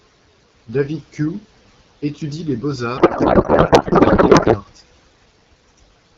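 Speech carried over AMR wideband, with a codec payload misread from 2.97 s to 4.58 s, right after "étudie les". For that stretch the voice gives way to garbled noise and warble that barely tracks the speech. The sound points to octet-aligned AMR frames being unpacked as bandwidth-efficient, so every field is read from the wrong bits. A spectrogram would lose its harmonic stripes and formants there and show smeared broadband hash, and the waveform envelope would stop following the syllables. Around it, the coding sounds clear and only lightly coloured, which fits a 12.65 kbit/s mode.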